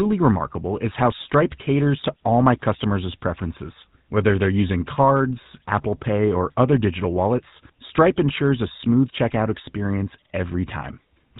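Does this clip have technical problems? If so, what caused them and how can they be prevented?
Yes. The speech has a GSM full-rate codec sound throughout, plainly audible as a buzzy, gravelly roughness and nothing above 4 kHz. That fits a 13 kbps stream, where a vocal-tract model is excited by sparse, regular pulses. Prevent it by recording or transferring over a wideband path instead of a GSM call.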